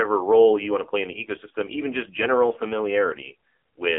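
From start to finish the speech has AMR narrowband mobile codec damage: squeezed into 300 Hz to 3.5 kHz, heavily buzzy and synthetic, which fits a low mode around 5.9 kbps.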